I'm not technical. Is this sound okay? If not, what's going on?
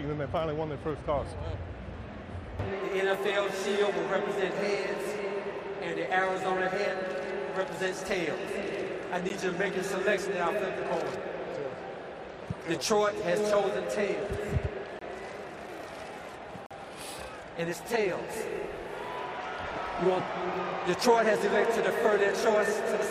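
No. A Bluetooth stall likely occurred three times: wireless interference delayed data, so the sound drops briefly to silence at 9.29, 14.99 to 15.01, and 16.66 to 16.71 seconds.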